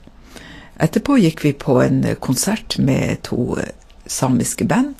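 Speech encoded at a low bitrate, likely Vorbis compression at around 37 kbps, runs throughout the clip: nothing remains above 14.2 kHz, and the coarsely quantised treble turns into grainy hiss, leaving tones rough and consonant attacks smeared.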